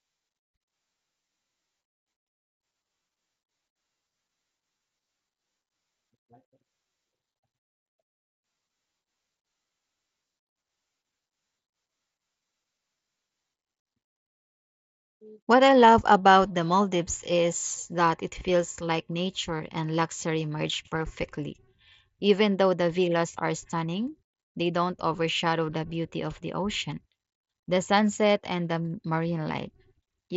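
Short concealed Bluetooth headset packet loss at 3.03, 4.78–4.80, 18.40 after "is that it", 19.58 before "and luxury merge perfectly", and 26.91 after "the beauty of the". The phone patched each gap by repeating the last few milliseconds, so the single lost frames at 18.40 and 26.91 are nearly hidden, while the longer runs sound like a brief buzzy tone with a small warble where real audio returns.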